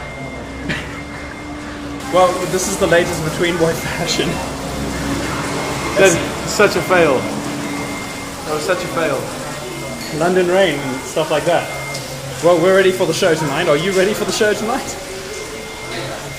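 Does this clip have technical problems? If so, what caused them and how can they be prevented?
Yes: from 0 to 2.0 s there's de-emphasis applied wrongly, so the sound goes dull and muffled, sloping down to about 14 dB less at 10 kHz than at 1 kHz. That's a treble cut meant to undo pre-emphasis, landing on audio that either never had it or already got it once. To prevent it, check each stage's emphasis setting so the cut runs only once, and only where pre-emphasis was actually applied.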